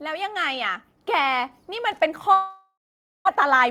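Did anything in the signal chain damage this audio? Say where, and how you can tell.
Yes. At 1.02 s, call processing raised the microphone volume in one step of about 4 dB. Voice and background jump together, unlike a talker simply speaking louder.

From 2.33 to 3.29 s, a fading buzz gives way to about 0.5 s of silence, and the sound resumes with roughly 0.6 s missing. This points to a long network dropout, likely, rather than a brief glitch.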